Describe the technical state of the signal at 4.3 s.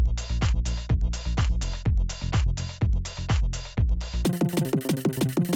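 At 4.3 s a wrong sample rate fault runs from 4.25 to 5.56 s: sound plays three times fast and 19 semitones high, consistent with 16 kHz material played at 48 kHz.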